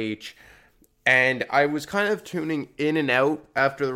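No technical faults can be heard in this speech recording.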